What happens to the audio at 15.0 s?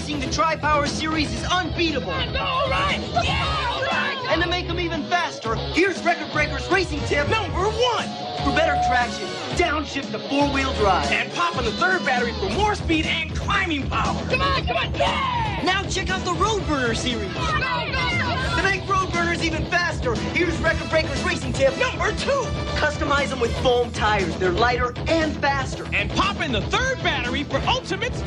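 Nothing goes wrong at 15.0 s; the audio plays through that moment intact, with no dropout, click or other fault.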